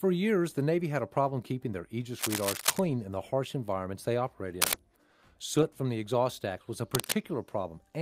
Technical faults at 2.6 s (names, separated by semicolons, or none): cable scratch noise